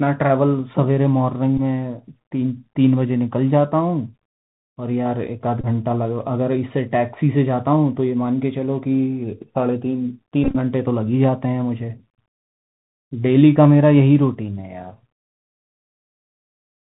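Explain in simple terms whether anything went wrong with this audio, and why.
The whole recording passed through a Bluetooth CVSD headset codec. It is a narrowband phone-style codec. It keeps nothing above 4 kHz, so the speech sounds muffled. S sounds turn scratchy, loud bright sounds distort, and a grainy hiss sits underneath throughout.

There are also three moments of Bluetooth headset packet repeated. Bits of sound went missing between headset and phone, and the last chunk was replayed instead. Short buzzy stutters come at 1.58 to 1.60 s and 5.61 to 5.65 s. A longer, broken-up patch runs from 10.44 to 10.55 s.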